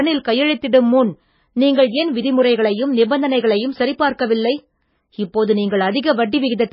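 Speech runs the whole way through with heavy MP3 compression damage, most likely from a starved encoder. Nothing is left above 5.5 kHz, so s sounds go dull, and the swirly, watery texture fits a very low bitrate, somewhere near 18 kbps.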